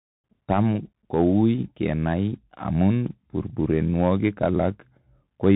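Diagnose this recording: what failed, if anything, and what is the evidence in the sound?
The speech went through a Bluetooth CVSD headset codec, a codec-stage fault present throughout. Nothing above 4 kHz survives. S sounds turn scratchy, loud bright syllables distort as the adaptive one-bit step lags, and granular hiss sits underneath, which fits a 64 kbps CVSD link.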